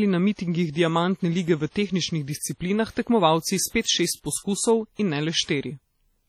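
Heavy WMA compression, likely at a low bitrate such as 32 kbps, runs through the whole speech clip. Long transform blocks smear quantisation noise across tens of milliseconds and zero out weak detail, so the speech rings and sounds washy, with a hiss that breathes along with it.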